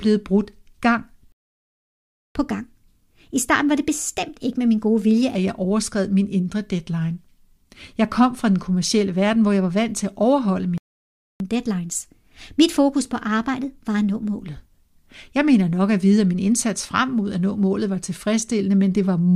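At 1.32 s the speech cuts to silence for about 1.03 s, resuming at 2.35 s, and at 10.78 s it goes silent again for 0.62 s, until 11.40 s. These are playback stalls, likely the player running out of buffered data or its thread being blocked.

After each gap, from 2.35 to 5.35 s and from 11.40 to 14.40 s, comes catch-up at higher speed: the backlog is resampled to 1.15 times normal, so tempo and pitch rise together, by about two semitones, for three seconds. A plain pitch shift would leave the tempo unchanged.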